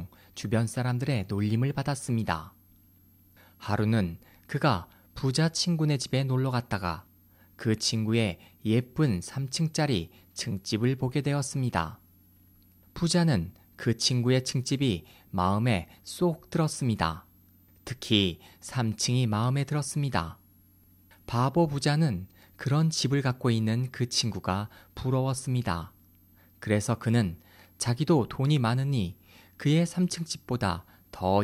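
A switching supply whistle sits under the speech for the whole clip. A high tone wanders between about 11.6 and 12.9 kHz, roughly 40 dB below the signal. A power supply is running in an audible burst mode or beating with another one.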